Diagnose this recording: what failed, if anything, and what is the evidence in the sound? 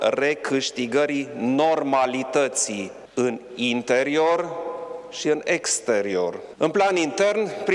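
Nothing failed; no audible fault at any stage.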